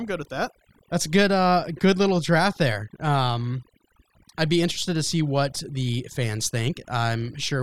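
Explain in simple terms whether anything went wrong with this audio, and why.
Something did go wrong: this speech recording suffers from overdone noise removal, and it lasts the whole clip rather than appearing at one moment. A noise reduction tool was pushed too hard. It shut off narrow slices of the sound whenever they resembled background hiss, and it took the softer parts of the voice along with them. The result is a background that drops and breaks up into twinkling specks.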